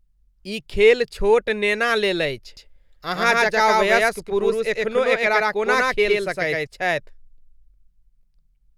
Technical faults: doubled audio track

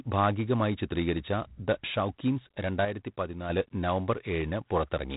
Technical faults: G.726 ADPCM

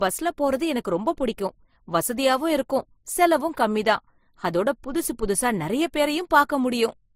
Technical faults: transcoding between lossy codecs

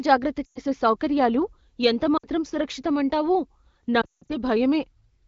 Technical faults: lost AMR speech frames

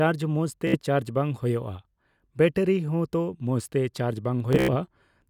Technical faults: Bluetooth stutter

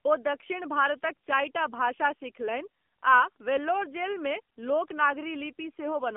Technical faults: AMR narrowband mobile codec

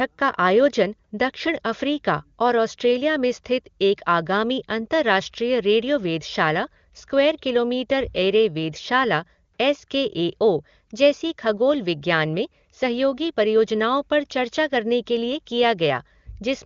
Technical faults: none

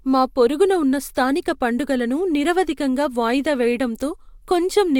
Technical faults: none

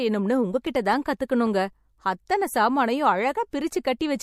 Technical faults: CD scratch ticks; pre-echo

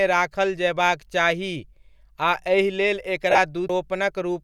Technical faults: lost LE Audio frames; CD skip

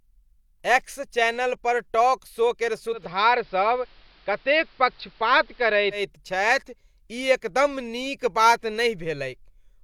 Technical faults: digital radio blending to analogue

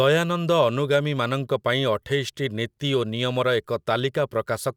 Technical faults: clock slip clicks

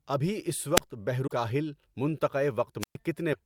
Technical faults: wireless microphone squelch dropout; broken MP3 bit reservoir

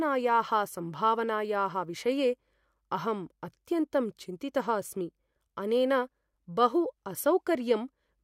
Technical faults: none

